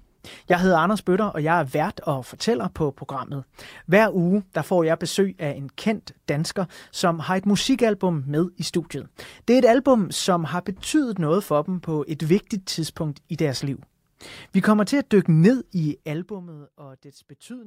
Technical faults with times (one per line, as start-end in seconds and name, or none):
15.93-16.42 zipper noise